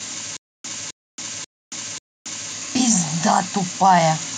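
From 0.37 s to 2.52 s the speech breaks into a stutter with silent gaps: a 262 ms fragment plays, then about 276 ms of dead silence, and the same fragment returns four times at an even 538 ms period. This is likely a stalled player or stream replaying its last buffered chunk at each retry. The audio that should have filled that stretch is lost. A waveform shows identical blocks separated by flat silent lines, and a spectrogram shows repeated matching patches with blank columns between.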